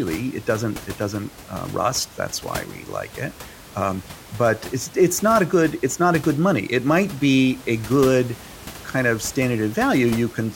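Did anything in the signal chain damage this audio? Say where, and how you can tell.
No, nothing in this speech recording shows chain damage.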